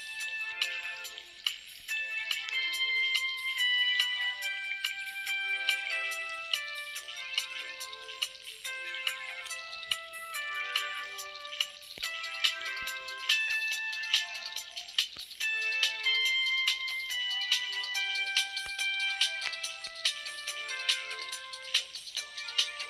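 At 13.48 to 13.50 s, lost LE Audio frames: a 22.5 ms gap, fitting three dropped frames, was filled with the last spectrum under random signs, briefly smearing the sound into noise.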